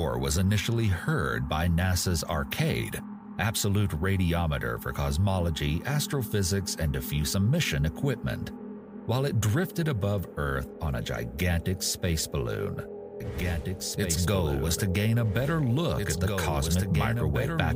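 A doubled audio track begins abruptly at 13.20 s and runs to the end. From that point a second, full-band copy of the sound plays about two seconds behind the original, roughly 5 dB quieter, with no decay or room colouring to set it apart. The lag is fixed, so everything is heard twice. This likely comes from the same signal being captured again through a slower path, or from an edit holding two misaligned copies.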